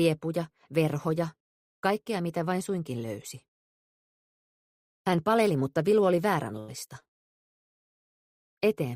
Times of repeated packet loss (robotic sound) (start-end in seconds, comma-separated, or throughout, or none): 6.59-8.09